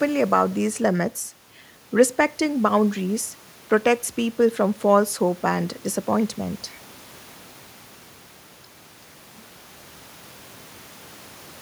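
Listening closely to the speech, nothing stood out as a technical fault at any point.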